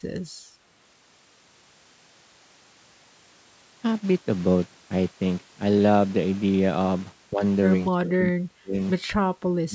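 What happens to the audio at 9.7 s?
From 9.68 to 9.74 s the speech drops by roughly 25 dB. This is likely speech suppressed in double talk, where the echo canceller mistook it for echo.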